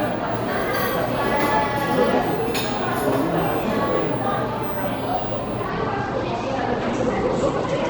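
A recording of everyday sounds that's clean up to about 5.7 s, when a call bitrate drop kicks in and holds right to the end. The top end collapses, with the audio band shrinking from around 20 kHz to 8 kHz, so everything turns muffled and a bit rough and watery. It sits at its worst for roughly the last 2.1 s. That's the encoder being starved of bits after the bandwidth estimate fell, consistent with a drop from something like 64 kbps to about 12 kbps.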